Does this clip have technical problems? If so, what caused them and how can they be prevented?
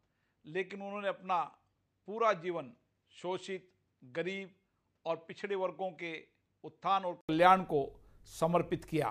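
Yes. From the start to 7.29 s the sound is dull and noticeably quieter, with nothing above 8.3 kHz and a faint, different hiss underneath. Then there's an 80 ms gap and it opens up. That's likely the input switched to a poorer device. To prevent it, lock the recording input to the intended mic and turn off automatic device switching.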